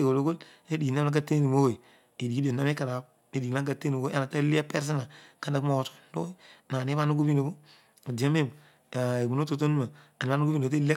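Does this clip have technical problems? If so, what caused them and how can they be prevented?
No, nothing in this speech recording stood out as a technical problem on listening, so there is nothing to trace back or prevent.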